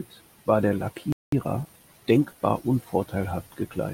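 A speech clip in which the sound cuts out abruptly just after "war der" at 1.12 s and stays silent for 200 ms until 1.32 s, then resumes where it stopped. This is a playback stall, most likely the player running short of data or its thread being briefly blocked. From 1.32 s to 2.64 s the speech sounds hurried at an unchanged pitch, about 1.15 times normal speed. That is time-compressed catch-up: the player trims its backlog by cutting out short slices and cross-fading across the joins.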